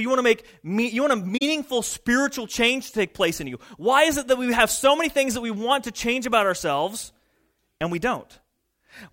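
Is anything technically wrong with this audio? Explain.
Yes. There is one fault, an AAC frame loss with muting. It runs from about 1.37 to 1.42 s, right after "me you want a" and before "spiritual change to take". Compressed frames went missing, and the decoder filled the gap with silence. The overlapping transform windows fade the sound down and back up around the hole. The result is a soft-edged dropout of about 43 ms, which fits two lost frames.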